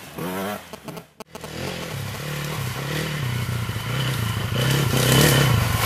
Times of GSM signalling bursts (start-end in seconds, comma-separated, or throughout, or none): 0.73-2.16